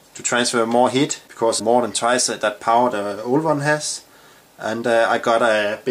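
No technical faults are audible anywhere in the clip.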